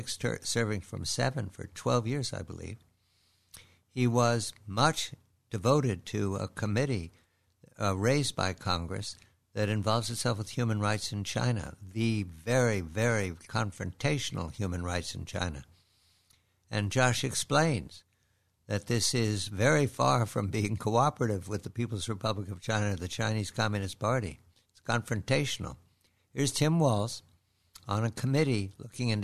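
No technical faults can be heard anywhere in the audio, and the signal holds steady with nothing breaking into it at any point.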